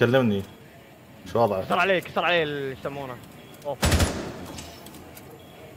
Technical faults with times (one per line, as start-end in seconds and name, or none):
2.07 corrupt frame decoded